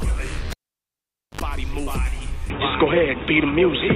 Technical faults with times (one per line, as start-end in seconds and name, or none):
0.50-1.41 cable pulled and plugged in
2.50-3.95 input switched to a poorer device